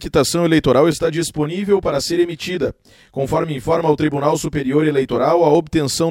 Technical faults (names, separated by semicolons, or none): channel delay (comb filtering)